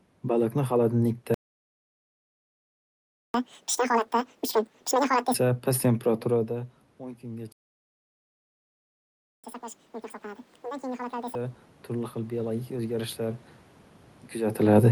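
At 1.34 s the speech cuts out completely and stays silent for 2 s, until 3.34 s. It then resumes from where it stopped. This is a playback stall, likely the player running out of buffered audio or its playback thread being blocked, so nothing reached the output for that time.

From 3.34 s to 5.34 s the speech comes back at double speed and noticeably high-pitched, around ten semitones up. It sounds hurried and chipmunk-like, then settles back to normal. This is catch-up at higher speed. The player resampled its two-second backlog at 2x to regain the lost time, so pitch rose along with tempo.

Around 6.5 s the voice drops as the talker moves away from the microphone, with the input falling by about 17 dB. From 6.51 s to 13.49 s the level slowly swells back, with voice and room noise rising together by about 10 dB. This is automatic gain rising: the gain control sensed a quieter input and raised its gain gradually rather than at once.

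At 7.52 s a second playback stall silences the output for about 1.9 s, until 9.44 s. Again this is likely data starvation or a blocked thread.

From 9.44 s to 11.35 s there is a second catch-up at higher speed. The speech again plays at 2x and roughly ten semitones sharp before dropping back to normal pitch, as the backlog from the second stall is drained. All of this comes through a call path whose Opus coding limits the top end to about 12 kHz.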